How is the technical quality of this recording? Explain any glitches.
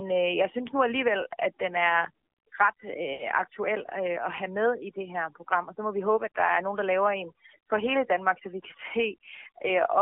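Quality is poor: the speech has been processed by overdone noise removal and a narrowband mobile codec, with one dropout.

Overdone noise removal runs throughout. The suppressor was set too aggressively and cuts frequency bands near its noise estimate, leaving a broken, twinkling background.

The AMR narrowband mobile codec also affects the whole clip. The speech was coded as AMR-NB at a low bitrate, consistent with roughly 7.4 kbps, and passes only about 300 Hz to 3.5 kHz, so it sounds muffled, buzzy and synthetic.

Lost AMR speech frames occur from 3.14 to 3.24 s. After frames failed, the decoder repeated its last good settings with falling gain. About 60 ms of audio is drawn out and fades, which fits three missing frames.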